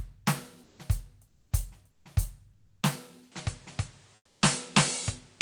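Music, with two kinds of fault. Comfort noise replaces the background in the quiet gaps at 0.63 to 0.79 s, 1.27 to 1.51 s, 1.91 to 2.05 s, 2.53 to 2.81 s and 4.15 to 4.41 s. The real ambience gives way to a flat, featureless hiss. Its level shifts by about -2, -11, -3, +2 and -6 dB respectively. This is likely Opus discontinuous transmission filling silent stretches with synthetic noise. At 3.32 s the input switches to a poorer device, with no gap and no clear level jump. From there to the end nothing is present above 10.5 kHz, so the sound turns duller. A new noise floor sits roughly 30 dB below the music. A microphone or headset-profile change is the likely cause.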